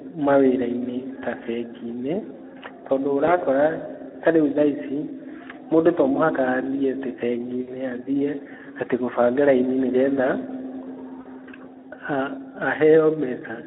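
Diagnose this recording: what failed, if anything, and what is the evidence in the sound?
Speex codec at the codec stage: the speech sounds hoarse and noisy throughout, squeezed into a phone band of roughly 250 Hz to 3.5 kHz. That fits a low bitrate around 11 kbps, where the CELP excitation gets too few bits to sound clean.

VoIP packet loss concealed by the speech codec, a network fault: there are smeared fades at 3.25–3.36 s, 7.61–7.75 s (just before "athiĩ atĩ gũbanga raini") and 11.21–11.28 s. The gaps sound like about 20, 60 and 40 ms of lost audio. The decoder extrapolated pitch and filter with falling gain, so the distortion lingers briefly after each gap.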